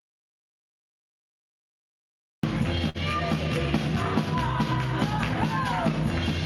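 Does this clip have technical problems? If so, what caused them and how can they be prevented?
Yes. The clip opens in dead digital silence, with no room tone at all, until sound suddenly appears at 2.43 s. This audio dropout to silence, already under way at the start, is most likely a lost input while the recorder kept writing silence. Checking cables, connections and mute states before recording prevents it.

From 2.89 to 2.98 s a sound is held unnaturally long. This is a short stall from a late packet. The jitter buffer ran dry and the receiver stretched the last audio for about 52 ms, then resumed where it left off, so nothing was lost but timing slipped by 52 ms. A larger jitter buffer or a steadier network connection prevents it.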